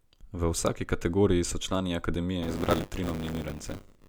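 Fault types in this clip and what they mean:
Buffer tearing, 2.42 s to 4.08 s: the software filling the playback ring buffer and the hardware draining it have drifted out of step, so their positions cross within every 10 ms period. A small slice of each period, roughly a sixth, replays speech from about 20 ms earlier, spliced in with hard edges, producing a steady robotic buzz at 100 Hz that rides on the speech and drops out in the gaps.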